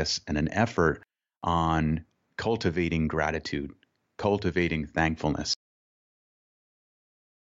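A speech recording with a cut-off end: at 5.54 s the audio just stops dead partway through a sound, with no natural decay or tail, and everything from there on is digital silence. What you're hearing is the final stretch of buffers never getting written out or played back, so the recording ends wherever the last buffer that made it through happened to finish rather than where the sound itself actually finishes.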